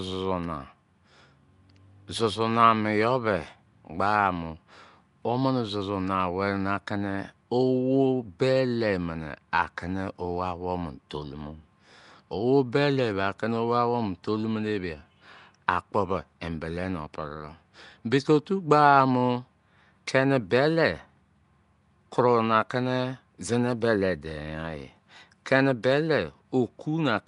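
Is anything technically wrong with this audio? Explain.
Yes. Throughout the speech, plainly audible codec damage sounds like Nellymoser compression, most likely from the Nellymoser Asao codec used for Flash microphone audio. That codec works on blocks of 256 samples at a fixed two bits per sample. Bands too weak to earn bits are replaced with generated noise, giving the speech a rough, hissy halo and a smeared, underwater character. Nothing is present above 10.6 kHz, which fits a stream of about 44 kbps.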